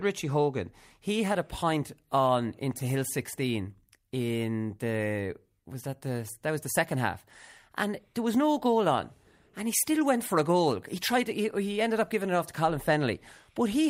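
A speech recording with no technical faults to report. Nothing in it calls for a time stamp or a cause.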